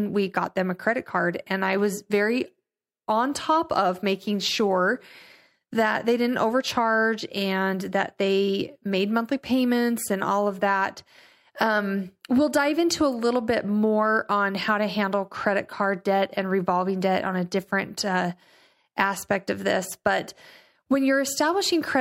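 Listening through this speech recording, nothing technical stood out.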